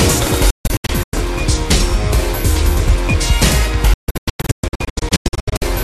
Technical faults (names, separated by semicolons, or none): digital broadcast dropout